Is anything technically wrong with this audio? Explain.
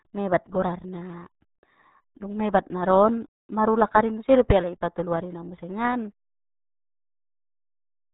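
Yes. The speech is degraded by the RealAudio 14.4 codec for its entire length. The band stops at about 3.8 kHz, and the heavy coding damage points to a very low bitrate, which fits the roughly 8 kbit/s of the RealAudio 1 dial-up speech codec. At that rate the coder keeps only a coarse model of the signal, so fine spectral detail is discarded and rebuilt approximately. The result is muffled, gargly speech.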